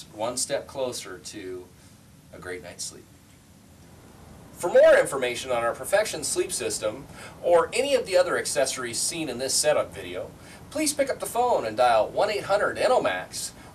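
Hard clipping flattens the peaks at 4.75–5.00 s (about 5 dB over), 5.94 s, 7.53–8.21 s and 9.58–9.71 s, giving brief harsh crackle.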